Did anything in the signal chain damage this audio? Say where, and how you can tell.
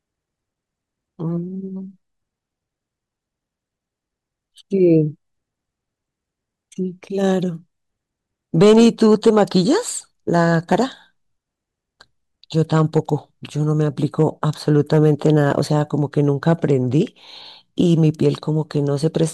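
Yes: hard clipping at the converter, peaks overdriven about 1 to 4 dB at 8.61–9.59, 10.36–10.75, 12.75–12.99, 14.2, 14.78–15.59 and 16.5 s. It shows as flat-topped waveform peaks with broadband harmonic smear on the spectrogram, heard as crackly fuzz.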